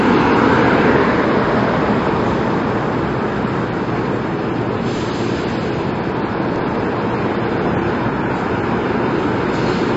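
Throughout, the sound is dull and smeared, with nothing above 7.7 kHz and a fizzy, warbling texture, likely AAC compression at a bitrate around 32 kbps; unlike plain low-pass filtering, it adds swirling artefacts. At 4.96 to 5.02 s and 6.56 to 6.62 s, chunks play out of order: a 20 ms chunk arrives two chunks late, producing a brief jumbled stutter with three hard joins, though nothing is missing, unlike a dropout.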